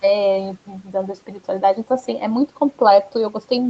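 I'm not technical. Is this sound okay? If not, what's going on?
No. Between about 0.67 and 1.4 seconds there is speech cut by the noise suppressor. The call's cleanup stage, meant to turn down steady background hiss, mistook parts of the speech for noise and lowered them too. Across roughly four-tenths of a second within that stretch, soft sounds and word endings come out faint or swallowed, as if the speaker briefly turned away from the microphone.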